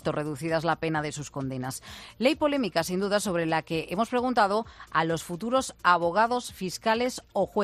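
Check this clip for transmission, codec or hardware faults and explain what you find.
There is one fault, DAB burbling, heard twice. From 3.24 to 3.26 s and again at 7.06 s, brief noise blips sit over the sound as single frequency bands jump in level. Weak reception let bit errors, around 0.1 to 0.15 percent, slip past error correction and corrupt MP2 samples and scale factors.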